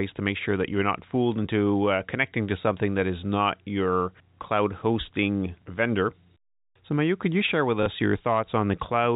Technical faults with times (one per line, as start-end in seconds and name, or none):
7.83-7.86 packet loss with last packet repeated